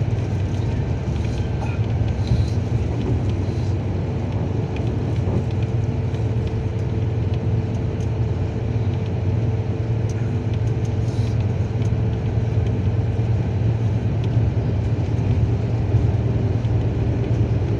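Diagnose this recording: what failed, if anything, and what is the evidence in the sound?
Nothing in this recording points to a failure at any stage, from the analogue wiring through to playback. No event in the sound calls for a diagnosis.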